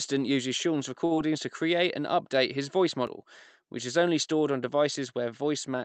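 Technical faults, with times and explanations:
1.05–1.13 s, short stall from a late packet: a packet arrived late, the jitter buffer ran dry, and the receiver held the last sound for about 54 ms until it came. Nothing is lost, but the sound lingers unnaturally before resuming where it stopped.
1.15–1.19 s, short concealed packet loss: just before "to create and update", about 20 ms never reached the Opus decoder in time, so the receiver extended the preceding sound for roughly 19 ms and blended back, leaving a brief smear or wobble where real audio should be.
1.38 s and 3.07 s, dropped buffer (overrun): the sound jumps ahead, once just before "to create and update" and again just after "and update his voice". Roughly 20 ms and 30 ms are missing, likely because buffers were overwritten before being read, so the remaining audio is spliced together directly.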